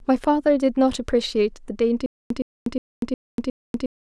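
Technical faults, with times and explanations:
2.06 s to the end: stutter with silent gaps. A 117 ms burst of the speech repeats five times, each followed by about 242 ms of dead silence, a 360 ms cycle. Likely a stalled player replaying its last fragment at each retry, losing the speech that should have continued.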